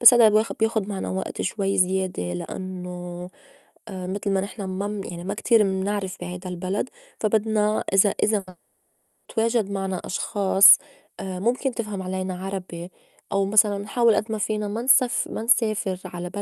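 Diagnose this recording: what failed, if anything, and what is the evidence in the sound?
Network stage: a burst of packet loss at 8.39–8.49 s. The last sound is held and faded over 80 ms.

A long network dropout is the likely cause of what follows: concealment fades within about 70 ms into 690 ms of flat waveform and a blank spectrogram, until speech resumes at "تواجد معنا أشخاص".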